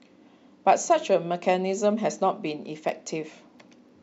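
From 2.79 s to 3.89 s the speech carries periodic USB or driver dropouts: a short train of about ten evenly spaced ticks, one every 0.1 s. Each tick marks a gap of only a tiny fraction of a millisecond, where a background task stalled the audio path and the missing samples were replaced by silence. The abrupt cut to silence and back produces a regular clicking that sits on top of the speech.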